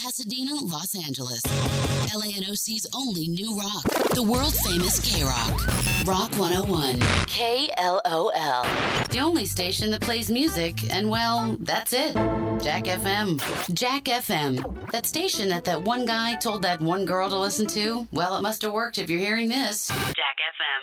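No technical faults are audible.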